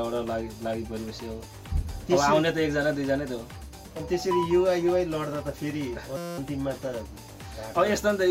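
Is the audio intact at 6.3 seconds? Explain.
No. At 6.3 seconds the audio is caught in a system hang loop that runs from 6.17 to 6.38 s. The system stalled while the sound hardware kept replaying the same ring buffer. One 5.8 ms slice repeats exactly, about 36 times, which fits a 256-sample buffer. Because the slice is so short, it becomes a steady buzz at about 172 Hz. Little or no audio seems to be lost around it.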